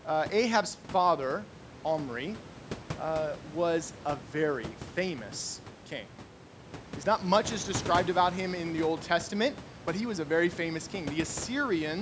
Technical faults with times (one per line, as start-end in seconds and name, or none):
none